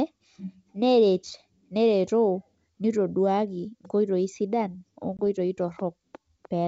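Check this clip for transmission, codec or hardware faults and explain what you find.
One transmission fault is present: packet loss on an ADPCM call, under the G.722 wideband coding, which stays clear. From 5.17 to 5.20 s, about 20 ms of speech drops to hard-edged silence, likely a couple of lost packets. The decoder's predictor and step size lose sync with the sender. Speech resumes with slight distortion, settling within tens of milliseconds.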